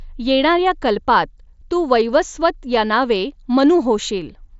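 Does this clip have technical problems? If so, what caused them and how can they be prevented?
No, this speech clip has no technical problems.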